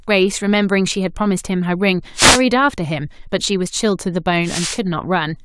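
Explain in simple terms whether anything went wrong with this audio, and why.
Twice a short burst of hissy static washes over the speech, from 2.14 to 2.42 s and again from 4.43 to 4.80 s. These are wireless microphone noise hits: the radio link briefly faded as reflected signals cancelled out, letting receiver noise break through.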